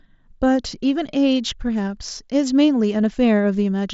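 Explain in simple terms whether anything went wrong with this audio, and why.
Nothing went wrong with this speech recording. It came through a Bluetooth headset using the mSBC headset codec, which keeps the voice clear up to about 8 kHz and adds only a light grainy texture on the louder sounds.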